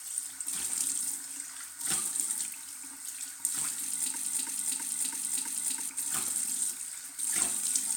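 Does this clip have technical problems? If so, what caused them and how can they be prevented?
Yes, there's a broken-record loop from 4.16 to 5.89 s: a 0.33 s chunk of sound repeats exactly, five times back to back, and whatever should have played there is gone. The likely cause is a stalled player or stream resending its last buffered fragment. To prevent it, have the playback or streaming stage output silence and flag the dropout on a stall rather than recycling old data.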